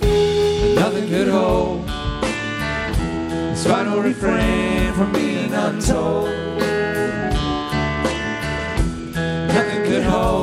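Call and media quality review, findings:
Bluetooth SBC bit pool drop, 1.60–4.43 s: treble dulls abruptly, gritty quantisation noise rises beneath the audio. Spectrogram shows upper bands thinning or blank. Sound points to bit pool falling from about 31 to 13, roughly 94 kbps, on a congested link.

Repeat at 7.07–10.01 s: same dulling and grit, same abrupt spectral ceiling, recovering only at the end. Probable component: phone's Bluetooth SBC encoder starving top sub-bands, coarsely quantising the rest.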